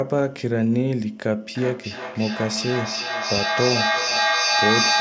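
From 1.47 s to the end, the speech keeps coming back at itself about every 0.4 seconds, each return thinner and more ringing. The repeats never fade; they stack up and reach about 1 dB above the speech itself. This is feedback echo between two devices: a second device in the same room on the call plays this microphone's signal, the microphone picks it up again, and the echo canceller cannot remove sound it did not play. The loop is loud enough to build rather than decay, heard within the call processing's band, which stops at 8 kHz.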